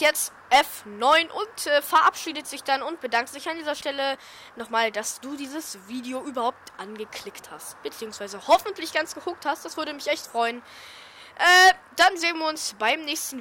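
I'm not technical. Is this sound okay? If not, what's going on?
No. There's a short patch of processor overload crackle from about 4.15 to 4.48 s, a third of a second of gritty, tearing crackle over the sound. The computer handling the audio got too busy to keep up. It works in tiny slices, each a few milliseconds long, and here it missed about fifteen of them. Each missed slice was simply skipped, leaving a tiny hard-edged gap, and together those gaps make the crackle.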